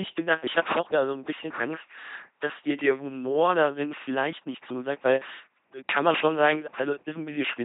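LPC-10 vocoder damage runs throughout. The speech is rebuilt from a short all-pole filter fed by either a pulse train or noise, so it buzzes robotically, with hiss or buzz where voicing is misjudged. Nothing remains above 3.8 kHz, which fits a 2.4 kbit/s stream.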